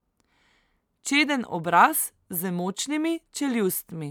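Nothing technical goes wrong anywhere in this bit of speech; there's simply no fault to point to.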